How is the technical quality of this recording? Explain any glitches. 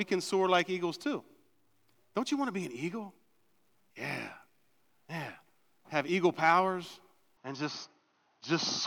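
One glitch near the end. From 7.37 s onward the speech abruptly loses everything above 6.4 kHz and shifts about 5 dB in level, with a faint new noise floor, but no gap. The likely cause is the input switching to a poorer device.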